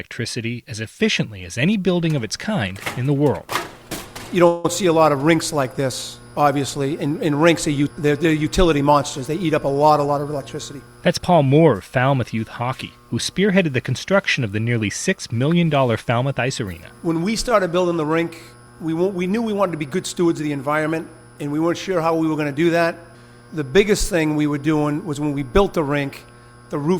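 At 4.47 s the sound stalls in a call audio freeze lasting until 4.65 s. For about 170 ms the last sound is stretched into a fading buzz or hiss rather than dropping to silence. Packets were likely held up in transit, so the jitter buffer ran dry and the receiver filled the wait. When the audio resumes, it continues exactly where it stopped. Nothing is lost, but everything after is pushed about 170 ms later.

From 9.34 s to 11.46 s a jitter buffer speed-up follows. The buffer had built up more audio than it wants, so the receiver trimmed tiny pitch-period-sized slices again and again. Playback runs at about 108% speed with the pitch unchanged. Roughly a fifth of a second is cut in total. The passage sounds hurried and rushed.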